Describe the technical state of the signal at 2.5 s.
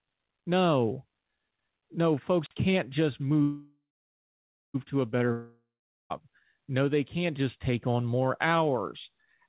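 At 2.5 s a wireless microphone squelch dropout is in progress (2.40 to 2.54 s). The radio signal fades until the receiver mutes, giving a rise of hiss, then a 46 ms silent gap.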